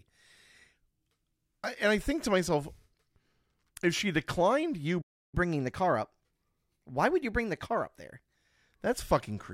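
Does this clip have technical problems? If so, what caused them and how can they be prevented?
Yes. After "if she declined you" the speech cuts out at 5.01 s and stays silent until 5.35 s, a playback stall of about 314 ms. The player most likely ran out of buffered data or had its audio thread blocked, so nothing reached the output. On a waveform this is a flat, near-silent line, and on a spectrogram it is an empty vertical band across all frequencies. A larger playback buffer and a thread that nothing else can block would prevent it.

From 5.35 s to 8.35 s the speech runs fast, which is catch-up at higher speed. The player resamples its backlog at 1.1 times normal speed to recover the lost time, so the pitch rises by about a semitone and a half and then returns to normal. On a spectrogram the harmonics sit slightly higher and further apart for those 3 s, and on a waveform syllables look compressed in time. 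A time-stretching method that preserves pitch, or a gentler catch-up rate, would prevent the audible shift.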